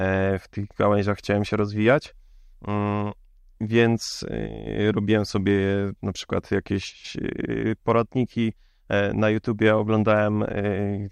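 A speech recording with no technical faults to report.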